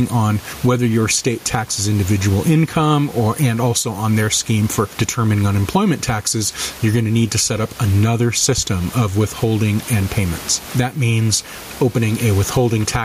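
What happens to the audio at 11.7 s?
At 11.7 s there is gain pumping, as through the whole clip. The gain was likely set too high, so a fast limiter clamps down on each loud syllable. Room noise sits about 30 dB below the speech, and the gain swings by around 15 dB.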